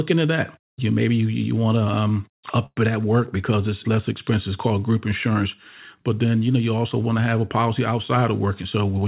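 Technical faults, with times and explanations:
2.66 to 2.78 s, call audio freeze: after "want to um up", roughly 0.10 s of fading concealment fill and 30 ms of near-silence, likely from late packets; the spectrogram shows a smeared band, then a gap, before "it at work because".
8.48 to 9.03 s, jitter buffer speed-up: the buffer trimmed about 50 ms in short pitch-period pieces, so this stretch runs at 107% speed with unchanged pitch; the waveform looks compressed in time.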